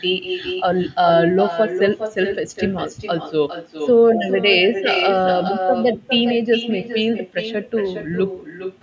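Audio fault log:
Throughout: echo with no canceller. Every phrase of the speech is trailed by a second, weaker copy arriving around 0.4 s later, only about 7 dB below the direct sound and noticeably thinner. That is the far end's loudspeaker output being picked up again by its own microphone and sent back across the network uncancelled. The copy carries the same call-processed band, topping out at 8 kHz, and the round trip accounts for the lag.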